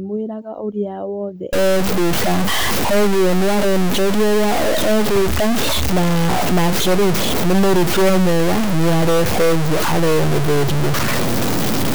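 From 1.53 s to the end, a harsh, buzzy distortion rides on the speech, and even the pauses fill with a steady hiss-like noise. The likely cause is a stuck bit, a fairly high-order bit worth roughly -15 dBFS. Unlike clipping, the grit persists through silence.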